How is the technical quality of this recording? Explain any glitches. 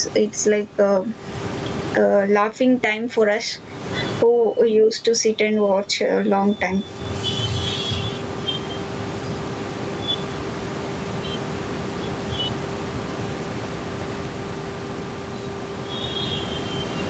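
The recording has one fault, gain pumping, throughout the speech. The gain swings by around 20 dB. The likely cause is gain set too high, with a fast limiter clamping it on each peak.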